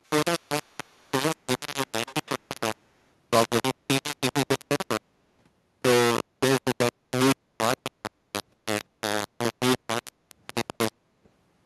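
Throughout, the speech is gritty and stepped, likely from low bit depth without dither: 3-bit rounding leaves error nearly as loud as the speech, seen as a staircase waveform and a broadband noise smear that tracks the voice.

At 0.06–0.1, 0.4–1.1 and 2.06–2.3 s, a faint copy trails 191 ms behind, likely an echo leak from a loudspeaker's imperfect canceller. It sits about 40 dB down, rising to about 20 dB down at 2.06 s, and shows as delayed ghost harmonics.

At 7.4–7.53, 7.91–8.02, 8.22–8.26, 10.12–10.29 and 11.01–11.15 s, the background is gated by the echo canceller. The room sound dips by about 7 to 12 dB, leaving brief dark notches in the spectrogram's noise floor.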